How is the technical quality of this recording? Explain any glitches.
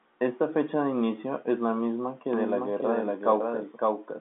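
The recording has one clear glitch on top of its telephone-band sound, which stops at about 3.8 kHz. From 2.33 s to the end, a doubled audio track appears. A second full-band copy of the speech, about as loud as the original, trails it by roughly half a second, most likely from an edit or a second capture path holding two copies out of step. It sounds like a dry, echo-free repeat, and the spectrogram shows overlapping duplicate patterns with an abrupt onset.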